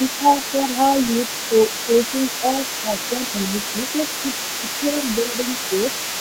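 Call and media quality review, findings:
Other side's voice leaking through, entire clip. Second talker audible about 10 dB under the speech. Likely echo canceller leaving residual loudspeaker pickup in the microphone signal.

Speech suppressed in double talk at 0.18–0.28 s, 0.52–0.56 s, 1.87–1.93 s, 2.83–2.92 s. Brief dips, deepest about 10 dB at first, others about 5 dB. Likely canceller ducking both sides during overlap.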